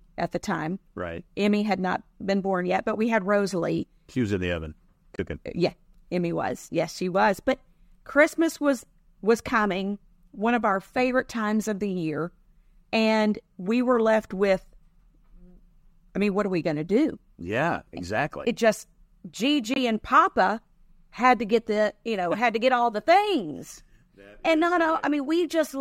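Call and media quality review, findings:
Corrupt frame muted, 5.16 to 5.19 s just after "was in the oven", and 19.74 to 19.78 s: abrupt digital silence, about 36 and 42 ms. Decoder rejected bit-damaged frames (about two, then one) and the player inserted silence. Timing intact, no skip, no concealment fill.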